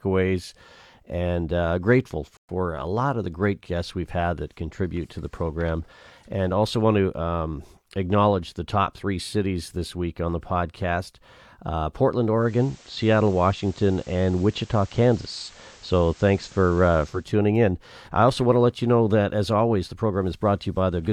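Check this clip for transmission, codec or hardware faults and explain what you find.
Two faults turn up: a short playback stall and a stretch where a hybrid radio falls back to its analogue broadcast.

From 2.37 to 2.49 s the player most likely ran short of data or had its thread blocked, so output stopped. The speech cuts out for 120 ms after "and uh grateful", then carries on from the same point with "a lot of the".

From 12.33 to 17.31 s the receiver lost the digital signal and cross-faded over 277 ms to the FM broadcast of the same station, then back again before "in I also want". The level shifts by about 2 dB, and a low hiss sits roughly 30 dB under the speech.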